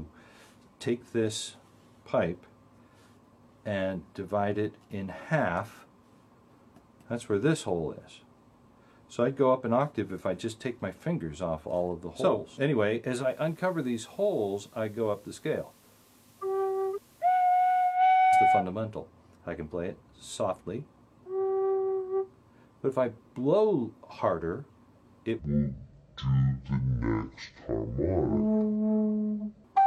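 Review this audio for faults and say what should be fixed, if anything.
From 13.15 s to 18.02 s the receiver blends from digital to FM over about 160 ms and back again. Hiss appears roughly 30 dB below the signal and the level drops about 2 dB. Improving reception or capturing the digital stream directly would prevent this digital radio blending to analogue.

From 25.39 s to 29.64 s the section is at the wrong speed, running at 0.554 times normal. Pitch falls by roughly ten semitones and the sound is slowed to match. The likely cause is playback or editing against the wrong clock. Confirming the sample rate and clock settings in the editing and playback chain would prevent it.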